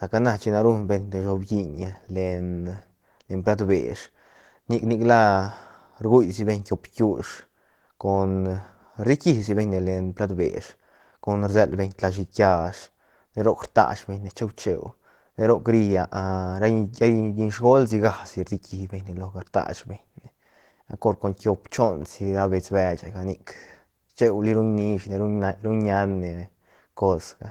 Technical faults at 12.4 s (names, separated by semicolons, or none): Opus voice compression